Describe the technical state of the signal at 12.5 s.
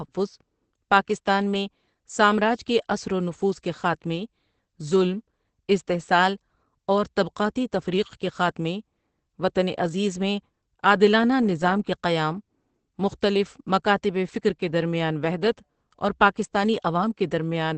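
At 12.5 s the speech carries damage that is likely Opus compression, present through the whole clip: a narrowed band with nothing above 8.6 kHz, and a muffled, hoarse texture typical of the speech (SILK) mode, consistent with a bitrate near 12 kbps.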